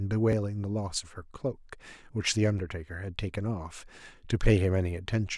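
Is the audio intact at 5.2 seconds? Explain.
Yes, at 5.2 seconds the speech plays through intact, with no dropout, click, distortion or other fault to be heard at that moment.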